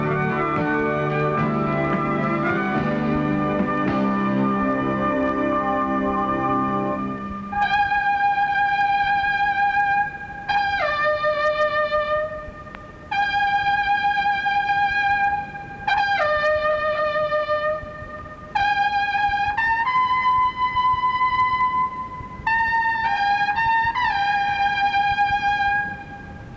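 Nothing in the audio stood out as a technical problem on listening.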